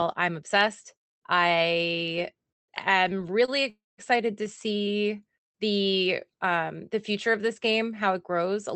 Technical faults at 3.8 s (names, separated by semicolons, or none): call audio freeze